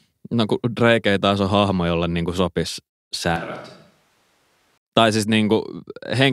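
Right after "jolle niin kuin sopisi", at 3.36 s, the speech suddenly goes roomy and hollow, losing its low end and dropping roughly 10 dB, with background noise coming up to around 30 dB below the speech. At 4.78 s it snaps back just as abruptly. It's most likely a switch to a distant microphone, with the close mic's signal dropping out and something further away, like a camera mic, filling in for that stretch.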